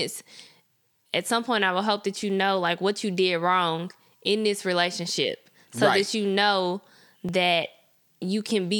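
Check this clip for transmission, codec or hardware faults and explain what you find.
One fault stands out: a regular click running through the speech from 0.54 s to 7.29 s, recurring about every 1.69 s, roughly five times in all. Each is a short tick or pop breaking the flow of the voice. These are likely clock drift buffer slips: two devices running on separate clocks, mismatched by several hundred parts per million, let the buffer between them drift until a chunk of about 70 samples is dropped or repeated.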